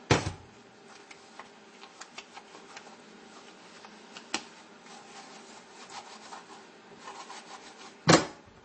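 All the way through, the treble stops dead at 8.3 kHz and the sound turns watery and swirly, likely MP3 compression at a starved bitrate around 32 kbps.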